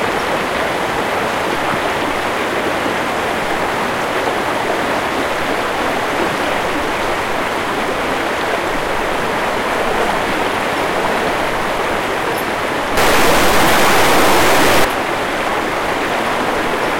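From 12.97 s to 14.8 s the sound turns harsh and buzzy, with a coarse grating edge and noise where it should fall quiet. The likely cause is a stuck bit, one data bit held fixed so about half the samples jump by a large step, around -10 dBFS.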